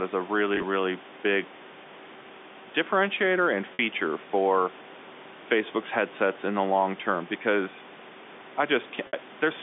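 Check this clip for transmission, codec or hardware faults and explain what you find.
The clip has one transmission fault: packet loss with pitch repetition, at three points. It occurs at 0.55 to 0.63 s, where about 50 ms of gaps are scattered over 80 ms with no run longer than 20 ms. It also occurs at 3.74 to 3.79 s, with about 50 ms missing, and at 9.07 to 9.13 s, with about 60 ms missing. Each time, the receiver fills the hole by repeating the last pitch period, fading it out over about 50 ms. At 0.55 s the gaps are short, so the speech briefly sounds held and slightly buzzy; at 3.74 s and 9.07 s the repetition fades into silence and the speech returns with a short cross-fade. All of this sits within the narrow telephone band.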